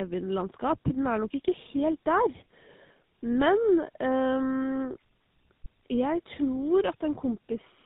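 Across the whole speech clip there is tandem speech coding: the signal has passed through two speech codecs in succession, an AMR-NB stage at 12.2 kbit/s and then GSM full rate at 13 kbit/s, with a G.711 link between them. Each coder re-encodes the previous one's errors, so the speech sounds rough and warbly, and nothing remains above 3.8 kHz.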